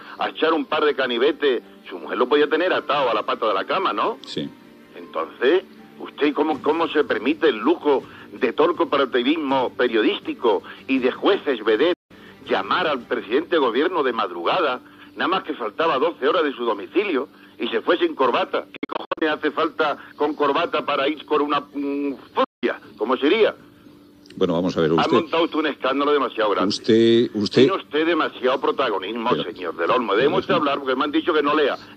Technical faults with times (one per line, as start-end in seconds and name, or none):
11.94-12.11 Bluetooth dropout
18.76-19.22 Bluetooth dropout
22.44-22.63 Bluetooth dropout